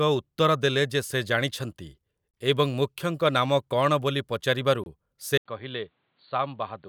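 The audio was delivered in 2.5-second chunks with silence left at each join, a gap between chunks that cuts 25 ms holes at 2.31–2.34 s and 4.84–4.86 s. From 5.38 s to the end, the input likely switched to a poorer device. After about 80 ms of silence, the sound turns dull and boxy, with nothing above 4.5 kHz, roughly 5 dB quieter, and new background noise about 45 dB below it.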